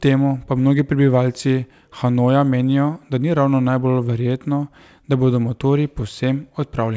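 Nothing goes wrong in this speech recording, which came through a call path that's working as it should, with the sound stopping at 8 kHz in the way you'd expect from a wideband call codec.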